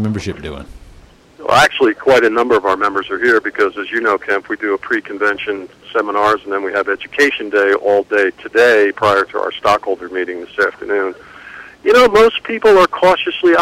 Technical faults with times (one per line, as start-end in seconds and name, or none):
none